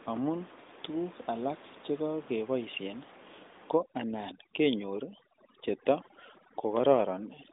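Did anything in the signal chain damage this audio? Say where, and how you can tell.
Yes. From 3.77 s to the end at 7.53 s, call processing applied overdone noise removal. The room noise, which sat about 22 dB below the speech, drops and breaks up into twinkling specks. The suppressor is pulling individual frequency bands down whenever they approach its noise estimate, so soft parts of the voice are cut along with the noise. This differs from the AMR narrowband band limit, which cuts everything above 3.8 kHz throughout the clip.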